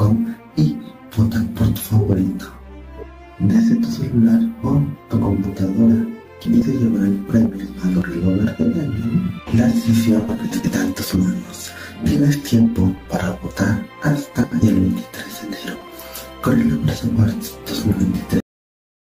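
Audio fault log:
6.45 s to 15.89 s, frames out of order: six short stretches, at 6.45–6.62 s, 8.95–9.04 s, 10.51–10.68 s, 12.97–13.06 s, 14.43–14.65 s and 15.75–15.89 s, play with two neighbouring blocks swapped. The blocks are 80, 40 or 60 ms long, which fits runs of roughly 20 ms frames decoded in the wrong sequence. Each swap gives a brief garbled flutter. Unlike a dropout, nothing goes missing and the timing never shifts.
18.40 s, cut-off end: the sound stops in the middle of an event and drops straight to digital silence, which lasts to the end of the file. There is no decay or tail, so the final buffers were never written out. A fade or a natural ending would taper off, and a mid-clip gap would be followed by sound again. Here the silence simply continues.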